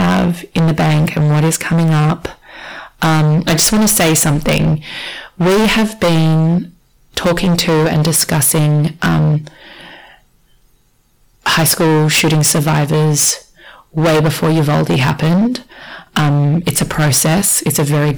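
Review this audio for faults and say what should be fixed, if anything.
A harsh, fuzzy distortion sits on every loud syllable from start to finish. This is hard clipping. The speech was driven about 22 dB past what the stage could pass, so roughly a third of the samples are cut flat, adding high harmonics. Set gain so peaks stay below full scale before conversion.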